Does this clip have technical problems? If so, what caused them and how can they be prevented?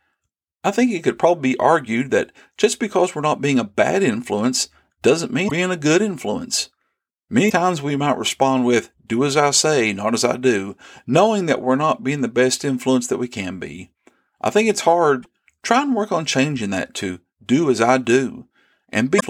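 Yes. Four short bursts of damaged data in a compressed stream. They fall at 5.47 to 5.51 s, between "a bad influence doesn't" and "a good influence", at 7.46 to 7.52 s, just before "we might respond with", at 15.19 to 15.26 s, between "be I think it's" and "try and work on", and at 19.16 to 19.23 s. Bytes in the file were corrupted. The decoder lost sync and hunted for the next frame header. Each break is 40 to 70 ms long. Checksummed storage and error-checked transfer would prevent this.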